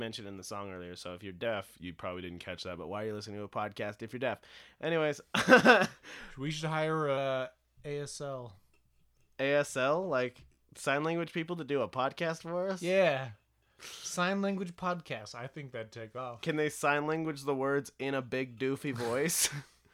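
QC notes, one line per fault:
1.45–2.79 s, 6.19–7.17 s, 15.21–16.18 s: drift correction step. Speech slows by 6.2% and drops about 111 cents, then snaps back, likely clock-sync rate adjustment.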